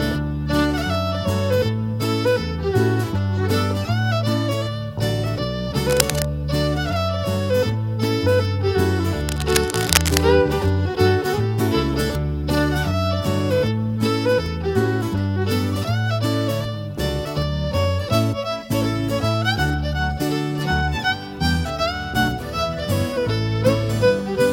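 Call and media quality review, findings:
Cable scratch noise, 5.89–6.25 s and 9.28–10.18 s. Dense, uneven scratching bursts, only a few dB under the sound. Likely a worn cable, connector or control being moved. Contact resistance fluctuating fast, injecting noise.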